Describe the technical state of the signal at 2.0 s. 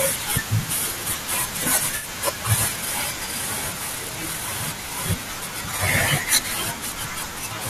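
Corrupt frame concealed, 1.96 to 2.06 s: bit errors damaged the compressed speech stream, and the decoder detected them and substituted its own fill. The concealed stretch lasts about 0.11 s, which fits roughly three damaged frames.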